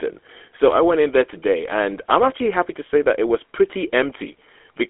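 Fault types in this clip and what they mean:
GSM full-rate codec: The speech runs through the old GSM full-rate coder, which fits 13 kbps. It models the vocal tract, drives it with a thinned-out pulse excitation, and cuts everything above about 3.8 kHz, so the speech comes out narrow, buzzy and plainly gravelly throughout.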